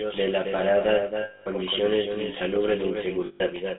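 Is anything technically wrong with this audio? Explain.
Yes, there are three kinds of fault.

Throughout, a second copy of the speech trails the first by about 300 ms, roughly 5 dB quieter, clean and without any room colour. This doubled audio track is likely caused by the signal being captured twice, once through a slower path that lags behind.

Also throughout, the voice is buzzy and gravelly, confined to roughly 200 Hz to 3.6 kHz. This is GSM full-rate codec damage: the coder models the vocal tract and excites it with sparse, regularly spaced pulses, which fits a 13 kbps GSM full-rate link.

From 1.22 to 1.48 s, just after "de la parada", the sound freezes into a rough metallic ring. A second ring runs from 3.26 to 3.42 s. These are lost GSM frames: the decoder repeats the last good frame's settings, bridging about 240 ms and 140 ms of missing frames.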